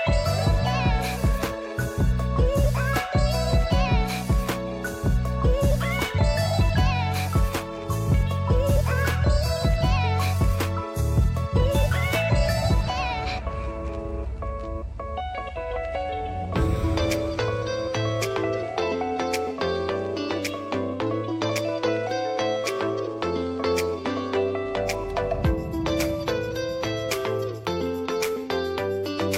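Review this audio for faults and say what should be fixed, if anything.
Nothing here needs fixing; no faults were found.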